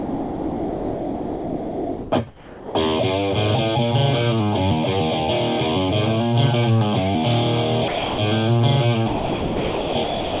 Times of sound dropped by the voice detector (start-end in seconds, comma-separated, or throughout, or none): 0.00-2.75, 7.88-8.18, 9.08-10.40